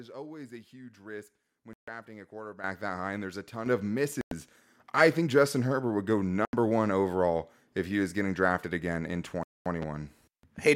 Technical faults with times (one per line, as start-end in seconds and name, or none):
1.73-1.88 Bluetooth dropout
2.64 microphone volume stepped up
3.66 microphone volume stepped up
4.21-4.32 Bluetooth dropout
6.45-6.53 Bluetooth dropout
9.43-9.66 Bluetooth dropout
9.82-9.85 loud pop